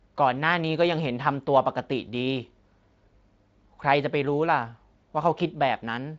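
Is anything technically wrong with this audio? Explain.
No, nothing here is technically wrong: the speech carries the light coding texture and the empty band above about 7.6 kHz that fit a normally working Speex wideband link at roughly 24 kbps.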